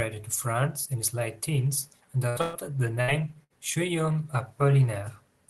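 Bursts of packet loss hit at 2.29–2.38 s, 2.41–2.56 s, 3.01–3.11 s and 3.44–3.53 s. Each time, consecutive packets were lost or came too late to play. The receiver stretched the last audio into a fading buzz or hiss for about 60 ms, or 120 ms in the second burst, then jumped ahead, skipping that stretch.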